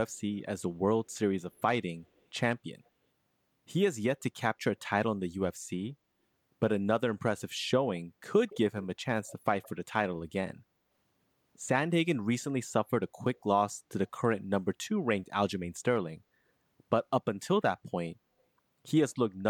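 Speech, with an echo leak in five short scraps. A faint delayed copy of the talker comes back at 2.17 s, 8.48 s, 9.28 s, 9.63 s and 13.35 s, each lasting a tenth of a second or less. The delay is about 160 to 170 ms. The copy at 8.48 s is the clearest, roughly 20 dB down. The one at 2.17 s is barely there. The likely cause is a far-end loudspeaker whose echo canceller let residue through.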